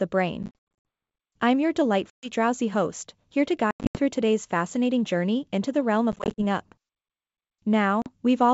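Packet loss on an ADPCM call shows up five times. From 0.43 to 0.86 s, about 280 ms goes missing in scattered holes, the longest 80 ms. Then 2.10 to 2.31 s between "I'm your" and "drowsy host here to", 3.71 to 4.00 s before "today's fascinating journey into", 6.12 to 6.41 s after "journey into the realm", and 8.02 to 8.12 s. Each gap cuts to hard silence. When the sound comes back, the decoder's predictor and step size no longer match the sender's, so the speech returns slightly distorted and settles within a few tens of milliseconds.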